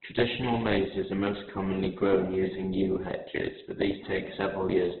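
A speech clip with heavy Opus compression throughout, likely from a very low bitrate around 8 kbps. Everything above about 4.4 kHz is gone, so the sound is narrowband and dull. Without enough bits, the encoder keeps each band's energy but fills in its detail, leaving voiced tones grainy, rough and noisy instead of clean. On a spectrogram, a flat ceiling at 4.4 kHz sits over smeared, speckled harmonics rather than distinct lines.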